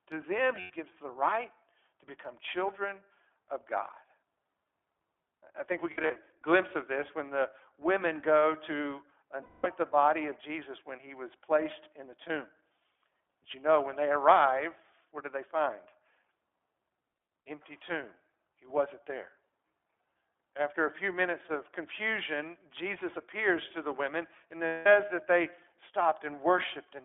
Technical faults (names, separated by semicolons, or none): iLBC codec; lost iLBC frames